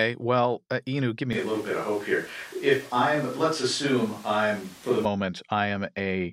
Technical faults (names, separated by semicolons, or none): switch to a distant microphone